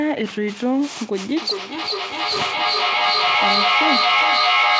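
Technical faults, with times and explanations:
1.37–4.79 s, feedback echo between two devices: from 1.37 s the speech starts coming back at a steady interval of roughly 0.4 s, each return thinner and more ringing than the last. Another device in the same room is playing this call aloud, and the microphone picks it up again; the echo canceller only removes its own device's playback, so the loop persists. The repeats build up instead of fading, peaking about 4 dB above the speech itself.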